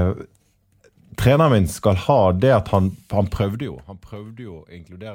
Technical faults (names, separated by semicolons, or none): none